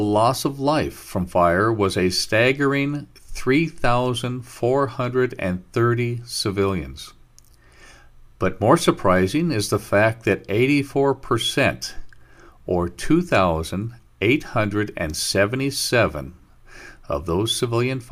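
No technical faults are audible anywhere in the recording.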